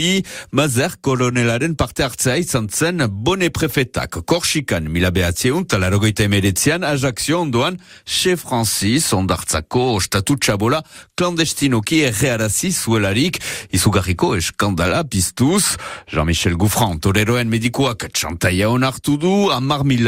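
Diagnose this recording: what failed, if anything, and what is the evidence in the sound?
Nothing in this speech recording points to a failure at any stage of the chain. There is no event in the audio that calls for a diagnosis.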